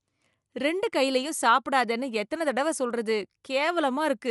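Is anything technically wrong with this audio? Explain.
Yes. Likely Dolby Digital compression, throughout the speech: a low bitrate, consistent with 64 kbps, cuts everything above 11.5 kHz and fills unfunded frequency lines with noise, giving dull, rough, fluttering sound.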